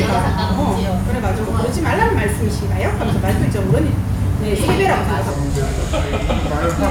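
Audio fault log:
5.30–6.91 s: section at the wrong speed. The sound plays at 0.745 times its proper speed, dropping roughly five semitones and dragging. This is likely a clock mismatch on playback. On a spectrogram, harmonics shift downward and stretch; the waveform's cycles visibly widen.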